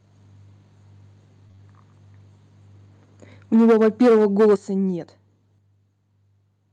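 Speech carried over a call path whose Opus coding tops out around 12 kHz. Three successive 20 ms packets missed the decoder from 1.47 to 1.60 s; short concealed packet loss filled them by extending the preceding sound, leaving a brief smeared wobble. From 3.54 to 4.54 s the input was likely driven about 7 dB past the converter's limit, a microphone overload that cuts off roughly a fifth of the samples and gives the loud syllables a harsh crackle. The microphone volume likely stepped down abruptly at 3.56 s (about 2 dB), 4.56 s (about 9 dB) and 5.58 s (about 4 dB), so speech and background drop together each time. At 4.18 to 4.20 s one lost packet was rebuilt from error correction, and that 20 ms sounds rougher and noisier.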